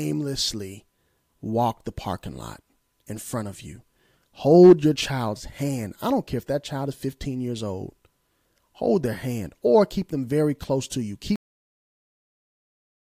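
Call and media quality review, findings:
Cut-off end at 11.36 s: speech stops mid-sound and drops straight to digital silence, with no decay, through the end. Probable component is the recording or playback buffer chain: the final buffers were never written or played out, truncating the last 1.7 s.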